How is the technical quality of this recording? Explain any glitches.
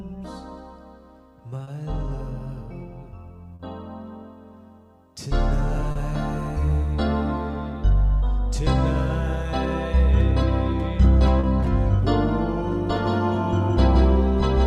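The recording has two kinds of fault: four brief dropouts that were covered over, and a duplicated copy of the audio near the end.

Short concealed packet loss occurs at 1.63, 3.55, 5.91 and 11.39 s. Each time, 40 ms of audio arrived too late to decode. The receiver filled the gap by extending the preceding sound, then blended back. It is heard as a brief smear or wobble.

A doubled audio track starts abruptly at 13.06 s and continues to the end. A second full-band copy trails the original by roughly 150 ms, about 5 dB quieter, with no reverberant tail. The likely cause is a slower second capture path or an edit that left two copies out of step.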